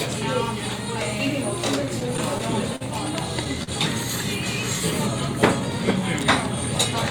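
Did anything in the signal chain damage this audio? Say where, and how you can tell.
Yes, at the network stage. Between 1.85 and 2.82 s there are repeated stalls (stutter): six brief holds totalling 91 ms, the longest 46 ms, with nothing lost. Packets arrived late and the jitter buffer kept emptying. The spectrogram shows short frozen, smeared bands, and the waveform shows repeated cycles that fade during the longer holds.

A short stall from a late packet follows at 3.63 to 3.69 s. One packet arrived about 37 ms late, so the receiver stretched the preceding sound for 37 ms and then resumed where it left off. The waveform shows one repeated stretch, and the spectrogram shows a brief horizontal smear.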